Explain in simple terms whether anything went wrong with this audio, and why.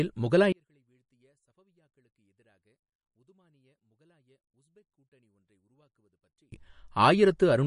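Yes, two things went wrong. From 0.52 to 6.52 s the speech almost disappears, leaving only a trace. The likely cause is one channel inverted, where the two stereo sides cancel. Unlike a dropout, the sound never cuts to true silence.

Throughout, the speech sounds watery and swirly, with nothing above 10.6 kHz. That points to MP3 compression, which is what cut the treble, rather than a simple muffling filter.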